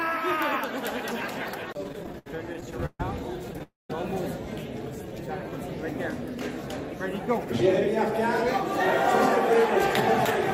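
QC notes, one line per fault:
1.83–3.00 s, repeated stalls (stutter): the sound keeps catching and restarting, about 16 short hitches across this span, the longest about 136 ms. Packets were arriving late or more slowly than they were played out, so the jitter buffer kept running dry and the receiver held the last sound each time to bridge the wait. Roughly 30 percent of the span is filler, about 349 ms in all, yet nothing is lost, so the audio drags and stutters rather than skipping.
3.63–3.90 s, call audio freeze: the sound stops and is carried on as a fading buzz or hiss that drops to near silence for about 180 ms, 266 ms of filled time in total, before picking up exactly where it left off. The likely cause is packets held up in transit, emptying the jitter buffer so the receiver had to continue the last sound until they arrived. The gap is inserted rather than cut, delaying everything after it by about 266 ms.
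4.83–5.68 s, jitter buffer slow-down: the audio runs at about 89 percent speed with its pitch unchanged, stretching this stretch by roughly 98 ms, so sounds seem drawn out. The receiver was rebuilding its reserve of buffered audio by repeating single pitch periods or slivers of pauses many times in a row, which lengthens the signal without shifting its pitch.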